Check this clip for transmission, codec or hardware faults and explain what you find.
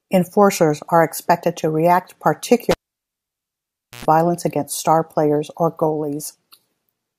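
One hardware fault is audible in this speech clip.

A cable pulled and plugged in runs from 2.71 to 4.05 s, right after "are expected to react". Pulling a live connector breaks the signal path abruptly, so a pop is followed by about 1.29 s of near silence. On reinsertion, the plug's tip makes contact before the ground does, letting about 100 ms of 60 Hz mains buzz through. A second pop then brings the sound back at "against star players or".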